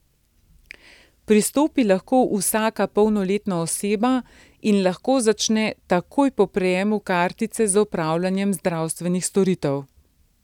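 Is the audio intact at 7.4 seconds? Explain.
Yes, the speech at 7.4 seconds is intact, with no dropout, click, distortion or other audible fault at that point.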